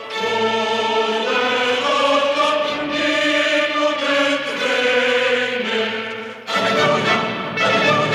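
No technical faults are audible anywhere in the recording.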